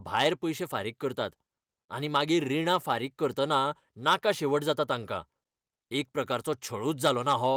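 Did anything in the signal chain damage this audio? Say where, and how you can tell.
Yes: hard clipping at 4.07–4.30 s and 7.05–7.46 s, after "एक प्रकारचो". Peaks about 6–7 dB too hot for the converter or gain stage are squared off, adding harsh crackling harmonics.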